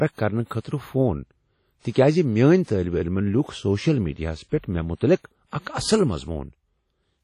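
Throughout the speech the sound is heavily damaged by transform coding: ringing, washy tails and a hiss that swells and fades with the level. There is nothing above 16.5 kHz. This is likely WMA compression at a low bitrate, around 32 kbps, where long blocks spread quantisation noise over tens of milliseconds. A spectrogram would show a hard ceiling at 16.5 kHz, with gaps and smeared, blotchy patches where weaker components were zeroed.

At 0.60 s and again at 1.79 s there is pre-echo. The codec's noise, sized for a sharp attack that falls late in its block, leaks into the quiet moment before it, spreading over 46 ms and 55 ms respectively. You hear a brief hiss ahead of each onset, and the attack sounds soft. A spectrogram would show a faint broadband smear just before each onset, and the waveform would show low noise where there should be silence.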